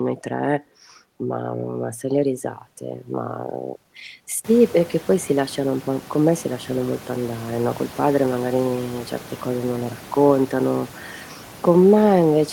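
No system faults are audible in the speech; the room's background noise, which comes up by about 24 dB around four and a half seconds in and then sits about 22 dB below the talker, belongs to the recording space.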